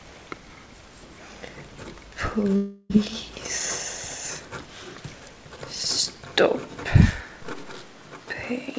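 From 2.56 to 2.92 s the sound breaks into a fading buzzy smear for roughly a third of a second, then carries on with that chunk gone. That's likely a long network dropout, with the receiver papering over the whole gap rather than leaving silence. The top end stops at 8 kHz throughout, which fits a wideband call codec like G.722.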